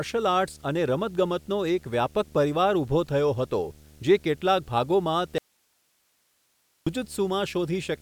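From the start, a video or display buzz runs under the speech: picture circuitry coupling into the audio at a 75 Hz field rate, heard as a harsh buzz with hash above it, roughly 25 dB below the speech. A spectrogram shows steady horizontal lines at 75 Hz and its harmonics.

At 5.38 s the speech cuts abruptly into an audio dropout to a faint residue, lasting 1.48 s until 6.87 s. Only hiss remains, some 45 dB down, likely because the signal feed broke while the path after it stayed live. The waveform collapses to a thin band with sheer edges.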